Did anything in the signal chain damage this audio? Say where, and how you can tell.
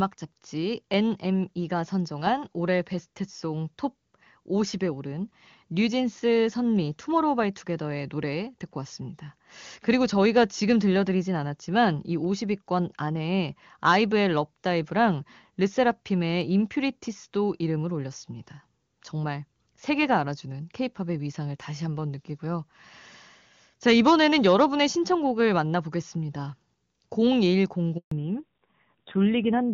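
Yes. At 27.97 s the speech drops to silence for 140 ms. This is a network handover gap: no frames arrived while the call switched links.

From 28.11 s onward, nothing above 4 kHz remains and speech turns dull and rough. This is a codec fallback to narrowband, consistent with a drop from HD Voice to low-rate AMR-NB.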